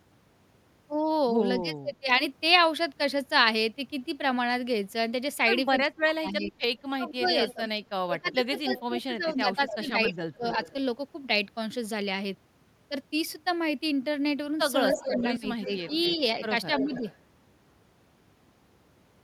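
Speech suppressed in double talk dips the voice at 1.6–2.21 s, 5.82–10.44 s and 14.92–16.42 s, by about 20, 25 and 10 dB, most heavily in the middle stretch. It is likely caused by an echo canceller turning down both its own talker and the loudspeaker echo while both sides talk, and it shows as notched, thinned envelope segments. Echo leak adds a copy delayed by roughly 280 ms at 7.25–7.54 s, 8.68–10.73 s, 14.94–16.16 s and 16.78–17.18 s, about 10 to 20 dB below the speech. This is likely residual loudspeaker pickup, and the spectrogram shows shifted repeats of the preceding harmonics.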